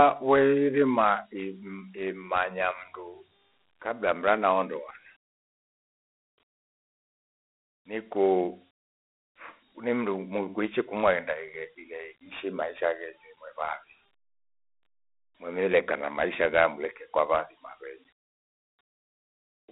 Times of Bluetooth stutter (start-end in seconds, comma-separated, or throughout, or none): none